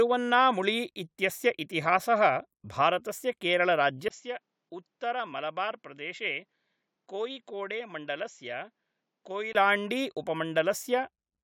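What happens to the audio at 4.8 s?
From 4.08 to 9.55 s the input has likely switched to a poorer device. After a 20 ms gap, nothing above 7.6 kHz remains, the speech drops about 10 dB and a faint new noise appears. The gap and the new noise distinguish it from plain filtering.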